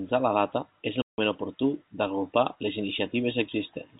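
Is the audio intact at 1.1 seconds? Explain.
No. At 1.1 seconds the speech is in a hole caused by packet loss filled with silence, running from 1.02 to 1.18 s. Packets went missing, and the receiver played digital silence in their place rather than concealing the gap. The 160 ms dropout fits eight consecutive 20 ms packets of the G.711 telephone stream. The signal stops and restarts abruptly, so both edges of the gap are hard.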